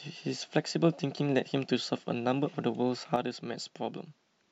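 A speech recording in which, at 3.16 s, the level falls abruptly by about 6 dB and stays down to the end of the clip. This is one channel dropping out: one side of the stereo signal is likely lost from that point, so the mono sum carries only half of the shared material, and anything that existed solely in the missing channel vanishes.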